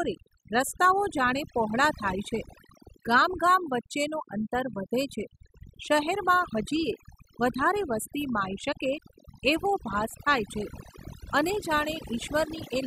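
Overdone noise removal runs through the whole clip. A noise reduction stage was pushed too hard on a noisy speech recording. It cuts individual frequency bands deep or to nothing whenever they sit close to its noise estimate. The softer parts of the voice fall below that line and vanish too. Between phrases the background drops and breaks up into twinkling specks.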